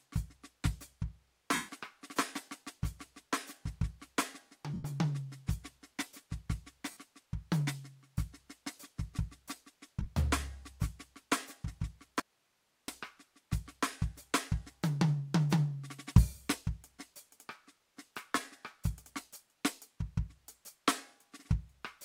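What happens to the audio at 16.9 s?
At 16.9 s the music plays through intact, with no dropout, click, distortion or other fault.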